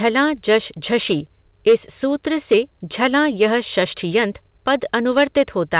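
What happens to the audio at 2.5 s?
Hard clipping hits from 2.52 to 2.57 s, just after "इस सूत्र". Peaks overshoot by about 4 dB and are cut flat, giving a brief harsh crackle.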